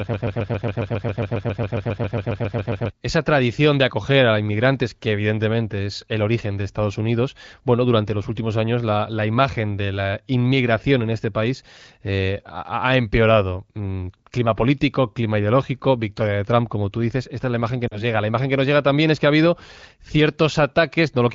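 Broken-record loop from 0.0 to 2.9 s in this speech recording: the clip opens already stuck, repeating a 136 ms fragment back to back about twenty times before "esa tradición de acoger" arrives. The likely cause is a player, encoder or stream stalling and resending its last buffered piece, so the audio meant for those seconds is gone. Lost AMR speech frames at 17.87 to 18.03 s, right after "es la imagen que": about 40 ms of signal, which fits two dropped 20 ms frames, is replaced by the decoder stretching its last good pitch and vocal tract settings at falling gain, giving a short smeared dip before the voice returns briefly weak or rough. Both sit on AMR wideband (HD Voice) coding at a higher rate, where the coding damage is light.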